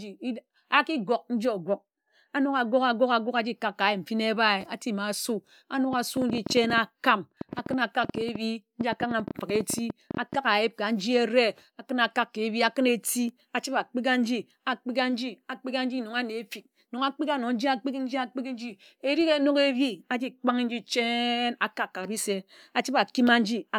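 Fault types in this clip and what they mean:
Train of clicks: from 5.93 to 10.36 s, a run of about fifty similar clicks ticks over the speech at an uneven rate near 10.9 per second, peaking about 5 dB above it, likely from electrical interference or a faulty connection or power supply.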